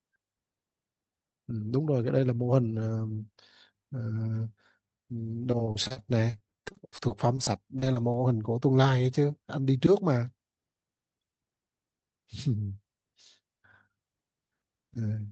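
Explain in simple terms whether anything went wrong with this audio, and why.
Between 5.51 and 8.16 s the speech turns choppy. This is repeated packet loss (robotic sound): more than twenty short gaps, none longer than 40 ms, were each covered by stretching the previous sound, so nearly a fifth of that stretch is patched-in filler.

From 10.16 to 10.58 s the speech briefly sounds hurried at the same pitch. This is a jitter buffer speed-up: the receiver had built up excess delay and trimmed it by cutting around 70 ms of tiny slices, running the audio at 113% speed.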